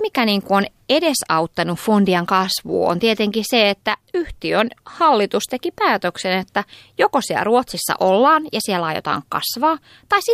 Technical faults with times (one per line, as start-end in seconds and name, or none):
none